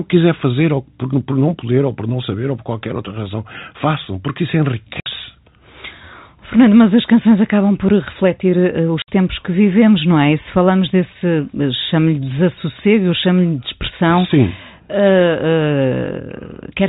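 Packet loss filled with silence interrupts this speech twice: the receiver dropped audio and played nothing in its place. A 60 ms hole with hard edges follows "razão façam porque isso" at 5.00 s. A second falls between "acabam por refletir uh" and "tempos que vivemos não" at 9.02 s. Each gap's length fits three 20 ms packets. The G.711 telephone coding limits the band to below 4 kHz.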